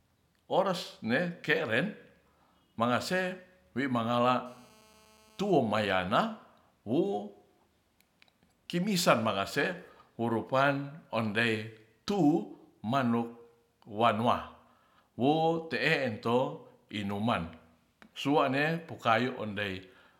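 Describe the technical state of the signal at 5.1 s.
At 5.1 s the speech carries GSM phone buzz, running from 4.46 to 5.51 s about 31 dB below the signal. A nearby 2G handset on a call transmits in bursts about 217 times a second, and the audio circuitry rectifies those radio pulses into a steady, hard, raspy buzz rich in harmonics. Mains hum is a smoother tone at 50 or 60 Hz and its multiples. This buzz sits at 217 Hz and has a distinctly pulsed, gritty edge.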